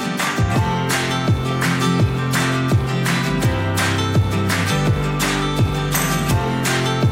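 No technical faults heard at any point; nothing to flag.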